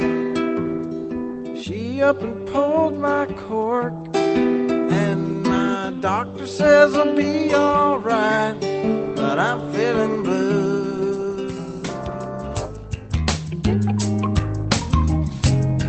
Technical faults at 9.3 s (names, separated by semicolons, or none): none